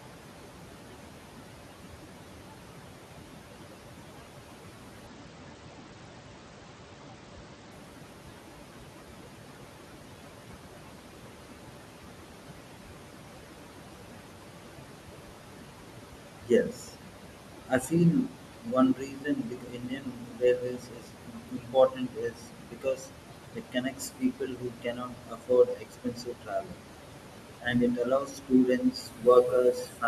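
Throughout the clip, noise suppressor artifacts are present. The room noise, sitting about 9 dB below the speech, is pulled down by about 21 dB whenever the talker pauses and then swells back under each phrase. On a spectrogram, the noise floor pumps from frame to frame.

From 5.07 to 7.72 s, there is a Bluetooth SBC bit pool drop. The link appears to have been congested, and the encoder cut its bit allocation sharply, which fits a fall from a bit pool of 31 to about 10, or roughly 77 kbps. The treble dulls and a gritty, granular noise rides on the voice until the rate recovers. A spectrogram shows the upper bands going empty in a hard-edged block for those seconds, with speckled quantisation noise below.

From 16.43 s onward, the suppressor repeatedly mistakes parts of the speech for noise. This speech cut by the noise suppressor occurs at 16.43 to 17.14 s, 17.68 to 17.95 s, 18.12 to 23.17 s, 23.55 to 26.82 s and 27.61 s to the end, with drops of about 20 to 22 dB. 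Soft consonants, word endings and quieter stretches sound swallowed or faint. This adds up to several seconds in the longer spans. The waveform shows the envelope abruptly collapsing mid-phrase, and the spectrogram shows harmonics fading out in patches.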